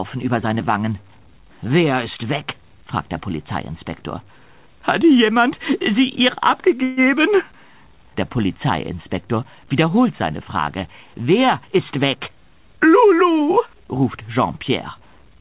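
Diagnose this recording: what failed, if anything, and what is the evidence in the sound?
Call audio freeze, network stage: at 6.83 to 7.0 s the sound smears into a fading buzz, then resumes without loss, likely delayed packets emptying the jitter buffer.

Jitter buffer speed-up, call processing: from 11.62 to 12.70 s the audio plays at 111% speed, same pitch, as pitch-period cuts remove about 150 ms of surplus delay.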